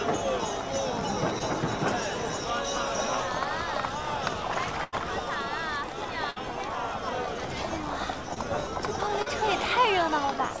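Short concealed packet loss at 1.39 to 1.42 s: a few hundredths of a second of audio arrived too late to decode, and the receiver patched the hole by extending the preceding sound before blending back, leaving a brief smear or wobble where about 20 ms is missing.

Burst of packet loss at 4.84 to 4.94 s: several consecutive packets went missing, about 80 ms in all. The receiver continued the last sound and faded it as the gap lengthened, so a held buzz or fading hiss replaces the lost stretch before the audio resumes further on.

A second burst of packet loss at 6.30 to 6.38 s drops about 60 ms in the same way, with a shorter concealed tail bridging the jump.

Short concealed packet losses recur at 8.34 to 8.38 s and 9.22 to 9.28 s, with about 20 ms and 40 ms lost. Each is heard as a short wobble where the extrapolated sound stands in. Throughout, the audio carries nothing above 8 kHz, which fits a wideband call codec such as G.722.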